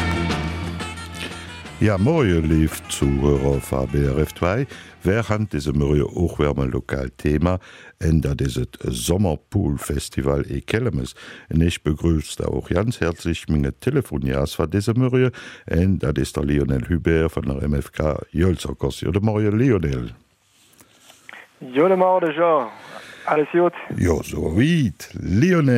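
Nothing is technically wrong with the audio in this clip.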